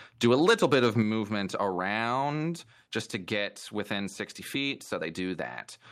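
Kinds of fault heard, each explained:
Microphone overload: The input gain was likely set too high, driving peaks about 4 dB past the converter's ceiling so their tops are sheared flat. From 0.24 to 1.0 s the loudest syllables carry a harsh, crackly edge, with around one percent of samples clipped.
Microphone volume stepped down: The call software likely reacted to the overload by cutting the device's input gain in a single 6 dB step. At 1.02 s, right after the distorted stretch, the voice and background both drop abruptly to a lower level.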